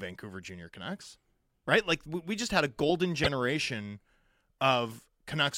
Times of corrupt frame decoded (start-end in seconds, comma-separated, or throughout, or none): 3.24-3.27